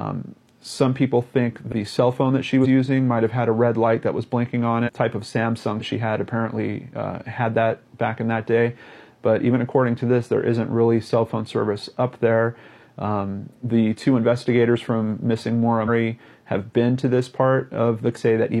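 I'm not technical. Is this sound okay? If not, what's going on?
No. The audio has compressed frames skipped at six points: 1.68–1.72 s, 2.60–2.67 s, 4.83–4.90 s, 5.76–5.82 s, 15.84–15.89 s and 18.12–18.18 s. At each, small blocks of the stored audio were lost or rejected as damaged, so playback jumps ahead, dropping from a tenth of a second to a full second. The gaps match blocks about 46 ms long.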